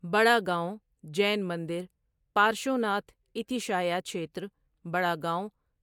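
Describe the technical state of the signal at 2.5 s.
At 2.5 s the speech signal is intact, with no audible technical fault at that point.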